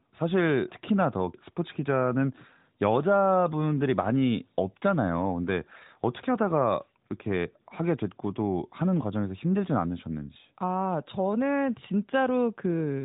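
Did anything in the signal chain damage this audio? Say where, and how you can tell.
No, nothing in the signal chain damaged this audio.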